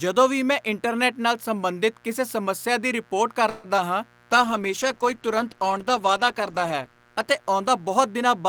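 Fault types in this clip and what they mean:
Mains buzz: throughout, a steady raspy buzz sits roughly 35 dB below the speech. Sharp switching spikes, twice per 60 Hz cycle, leak in through a dimmer, rectifier or unshielded path, spreading harmonics of 60 Hz up into the kilohertz range.
Call audio freeze: from 3.49 to 3.66 s, just after "ਕਿਸੇ ਸਮੱਸਿਆ ਦੀ ਰਿਪੋਰਟ", the last sound is stretched into a fading buzz or hiss for about 145 ms. The likely cause is late packets draining the jitter buffer. The speech then resumes where it stopped, nothing lost, only delayed.
Short concealed packet loss: between 3.76 and 3.89 s, shortly after "ਕਿਸੇ ਸਮੱਸਿਆ ਦੀ ਰਿਪੋਰਟ", a brief smear of about 10 ms stands in for about 20 ms of audio that arrived too late to decode. The receiver bridged the hole by extending the preceding sound, then blended back into the real signal.
Call bitrate drop: from 4.31 s to the end, the speech turns rough and muffled, consistent with the encoder cutting from about 64 to 13 kbps after the bandwidth estimate fell. 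The coarser coding and lost high frequencies are at their worst for roughly 2.5 s.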